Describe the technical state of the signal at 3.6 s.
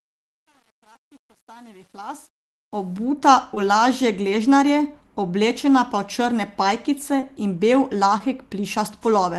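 Around 3.6 s there is short concealed packet loss: from 3.55 to 3.58 s, roughly 20 ms of the call's audio did not reach the decoder in time. The receiver filled the gap by extending the preceding sound, from its pitch if voiced or as shaped noise otherwise, then blended back into the real signal. What you hear is a brief smear or wobble right before "v lažje gležnarje oblečena", where a short consonant may be blurred or lost.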